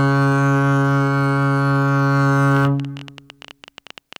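Likely interference or a faulty connection injects a train of clicks from 2.57 to 4.17 s: about twenty irregularly spaced pops, 13.2 per second, ticking over the music.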